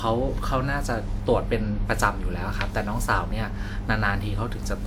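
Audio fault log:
Throughout, generation loss: the speech has a swirly, smeared, hollow quality, with soft consonant attacks, though content still reaches up to 20 kHz. That full bandwidth alongside the smearing likely means repeated lossy coding, which fits WMA at 128 kbit/s applied about four times over. Each decode and re-encode quantises the audio again on a shifted frame grid, so the coding noise and spectral gaps build up with every pass.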